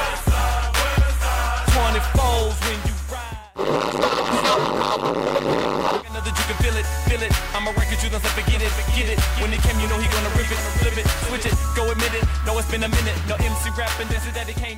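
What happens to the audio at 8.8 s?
At 8.8 s the clip is inside a doubled audio track that runs from 8.52 to 11.54 s. A second, full-band copy of the sound trails the original by roughly 400 ms at about 5 dB lower, likely from a second capture path or a misaligned edit. It has no reverb tail or room colour and switches on and off abruptly. On a spectrogram, every event repeats as a fainter twin shifted right; the waveform shows matching echoed envelopes.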